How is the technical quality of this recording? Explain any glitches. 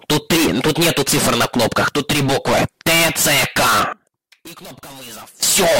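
One clear fault stands out near the end. From 3.93 s to 5.43 s the level falls by about 20 dB and the sound turns faint and distant, which is most consistent with one channel inverted. When a channel's polarity is reversed and the pair is heard summed to mono, everything shared by left and right cancels. Centred material and low end nearly disappear, leaving only the faint difference between the channels until full level returns at 5.43 s.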